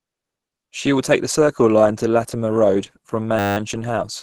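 A short speech recording carries two faults. Throughout, the sound is hoarse and grainy, with nothing above 12.3 kHz, which points to a band-limited hybrid-mode encoding at a low rate of roughly 16 kbps. The likely cause is Opus compression. Unlike MP3 damage, there is less swirling or watery warble, with few holes punched in the spectrum. The bands stay filled but turn rough and noisy. From 3.39 to 3.57 s a system hang loop replaces the sound with a steady 100 Hz buzz. The output hardware kept replaying one 10 ms stretch of its buffer, 18 times over, while the system froze, and little or no audio was lost around it. The exact period and constant pitch separate it from mains hum, which would run through the whole clip, and from a machine-gun stutter, which a much longer looped buffer would give.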